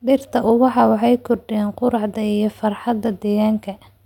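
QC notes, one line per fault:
Nothing to flag here; the speech comes across without any technical trouble worth noting.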